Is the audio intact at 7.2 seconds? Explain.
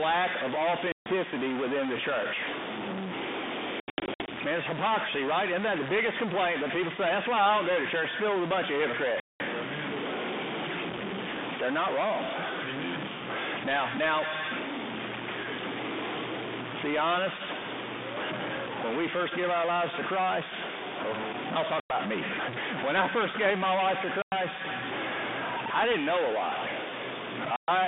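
No. At 7.2 seconds, as throughout the clip, the speech carries distortion, and the pauses fill with noise. This points to a stuck bit, likely a data line or converter bit held at 0 or 1, offsetting about half the samples by that bit's weight, heard over the narrowband 32 kbit/s G.726 telephone audio.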